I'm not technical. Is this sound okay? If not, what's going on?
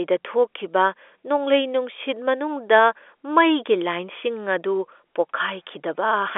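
Yes, no faults: this is speech carried over an ordinary phone line with G.711 telephone coding, so the thin, boxy sound with no deep lows or crisp highs is just how a normal phone call sounds.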